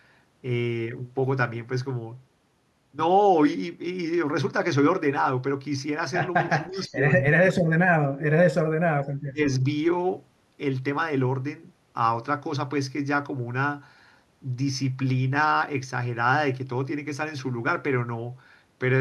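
Speech suppressed in double talk hits this speech clip at 6.53–7.03 s, 7.39–8.73 s and 9.25–9.40 s. The talker's level sinks by roughly 20, 40 and 25 dB respectively, likely because an echo canceller, hearing both sides at once, treated the talker as loudspeaker echo and attenuated it. Echo leak appears at 6.88–6.92 s as a faint scrap of voice delayed by 337 ms and very roughly 30 dB below the speech, likely loudspeaker pickup that the far side's canceller failed to remove and sent back.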